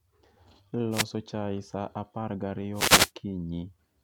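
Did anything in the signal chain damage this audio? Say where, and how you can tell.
Yes. The wireless microphone's FM radio link faded as reflected signals cancelled at the receiver, letting receiver noise surge up. That is the wireless microphone noise hit heard as bursts of static swishing over the speech from 0.91 to 1.05 s and again from 2.73 to 3.11 s.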